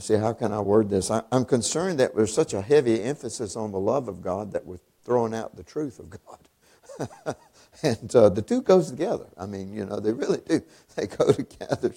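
There are no technical faults to describe at any point in this clip.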